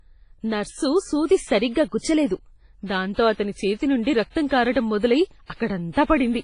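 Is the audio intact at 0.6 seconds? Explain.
No, at 0.6 seconds the speech carries damage present throughout, likely from heavy WMA compression at a low bitrate near 24 kbps: long transform blocks smear quantisation noise, giving ringing, washy hiss, with nothing above 10.4 kHz.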